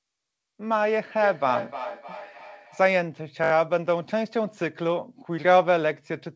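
A speech recording carries a feedback echo between two devices from 1.21 to 3.03 s. Each phrase returns roughly every third of a second, peaking at about 10 dB below the speech and sounding thinner and more ringing as it repeats. A second device in the room is playing the call back into a microphone whose echo canceller cannot remove sound it did not play. On a spectrogram this appears as weaker, evenly spaced copies of each syllable trailing behind it. From 3.44 to 3.52 s a repeated buffer causes a brief stutter. Audio arrived late, so the same short segment was replayed several times back to back, consistent with a 20 ms buffer. Little or nothing seems to be lost, but each join is abrupt. In the waveform this shows as an identical short shape tiled in a row with sharp edges. The spectrogram shows thin vertical lines at each seam and nothing above 8 kHz from the call codec.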